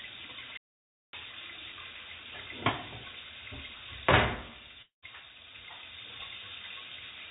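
A recording of everyday sounds, carried over a call path whose band stops at 4 kHz, consistent with G.711 mu-law. From 0.57 to 1.13 s there is an audio dropout to silence. The sound cuts off abruptly into silence with no room tone for about 0.56 s, most likely from a lost input or a stray mute. Unlike a network gap, nothing bridges it. From 4.82 to 5.05 s a long network dropout is concealed differently. The last sound is stretched into a fading buzz for about 0.2 s, then goes briefly silent for about 0.13 s before the audio resumes further on. That fading fill points to likely packet loss rather than a muted input.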